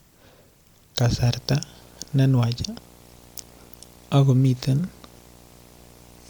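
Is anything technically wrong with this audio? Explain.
Yes. From about 1.18 s to the end there's video or display buzz: a screen or video cable is leaking into the audio path, giving a 60 Hz field-rate buzz with hash on top, sitting roughly 30 dB under the speech.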